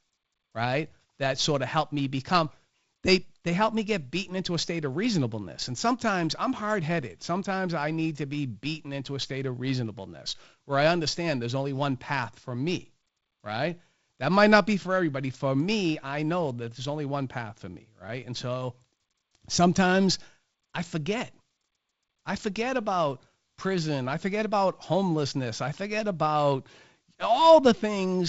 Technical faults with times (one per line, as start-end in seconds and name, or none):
none